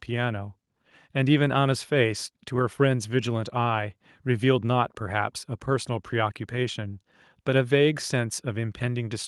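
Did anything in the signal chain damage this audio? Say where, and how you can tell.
No, nothing in the signal chain damaged this audio.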